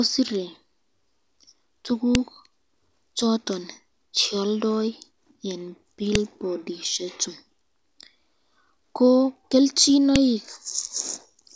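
A sharp, loud click snaps through the speech at 2.15 s, again at 6.15 s and at 10.16 s, exactly 4 seconds apart, each one a brief spike that ignores whatever the speech is doing. This is a file header played as audio: the stream was built from 4-second WAV pieces joined without stripping their headers, so the few dozen header bytes at the start of each piece were read as sample values and played out as a burst.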